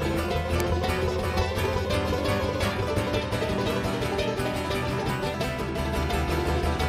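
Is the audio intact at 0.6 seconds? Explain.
No. Right at 0.60 s there's an electrical switching spike, a sharp snap that lasts only a couple of milliseconds and sits on top of the sound rather than replacing it. It peaks around -10 dBFS. The likely culprit is a nearby switch, motor or static discharge arcing briefly, with the audio line picking up that burst of interference as a tight click.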